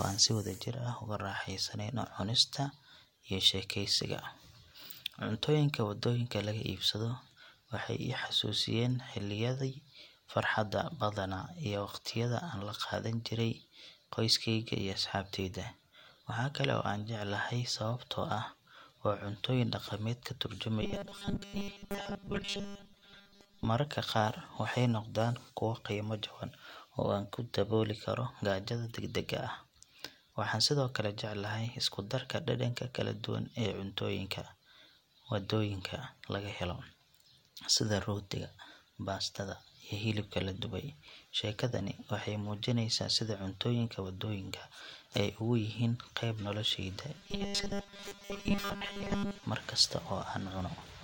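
Delivery of new audio likely fell behind twice, so the playback side kept filling the gaps by looping a buffer of about 5 ms, which forces a 200 Hz buzz. This robotic sound from repeated short buffers runs from 20.82 to 23.65 s, just after "dhaqameed ka", and again from 47.18 to 49.43 s. With most of each stretch made of repeats, the speech turns into a rigid metallic drone that only loosely tracks the words.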